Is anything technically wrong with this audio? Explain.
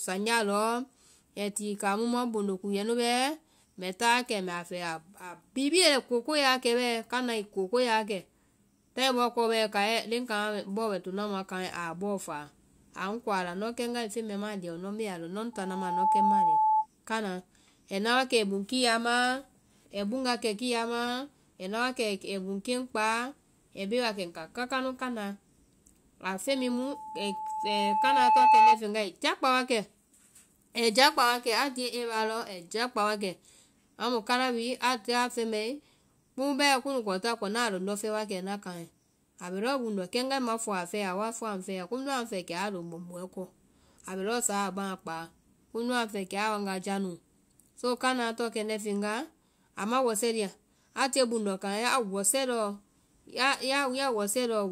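Yes. From 15.53 to 16.87 s and from 26.47 to 28.80 s, a steady 867 Hz tone swells over the speech, quickly and slightly louder first, slowly and far louder second. This is loudspeaker feedback squeal: the microphone picks up its own loudspeaker, and at 867 Hz the loop gain exceeds one.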